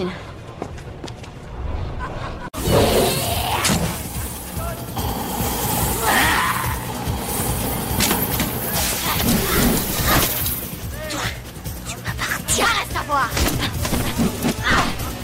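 No technical faults can be heard anywhere in the audio.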